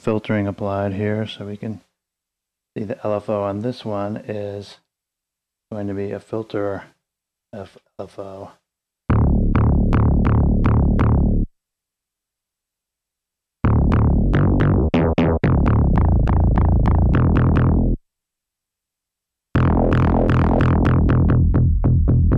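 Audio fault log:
No faults were heard in this clip. Nothing in the audio calls for an entry in this log.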